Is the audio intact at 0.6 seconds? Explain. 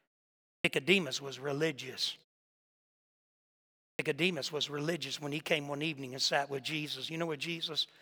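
No. From 0.59 to 0.64 s there is a clipped start after a pause: the output device slept through the opening 0.59 s of silence and woke late, swallowing about 54 ms. The sound begins abruptly without its first sounds, whereas muted pauses lose only background, never speech.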